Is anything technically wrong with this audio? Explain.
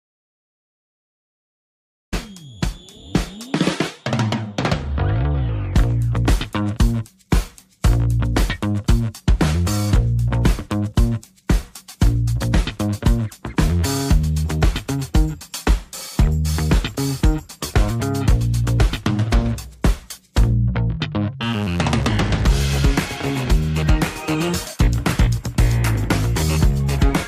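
Yes. From the start to 2.13 s there is an audio dropout to silence: silence with no room tone, ending in an abrupt cut-in. The input was likely lost, from a disconnected device, failed link or mute, while recording continued, so that opening material is gone.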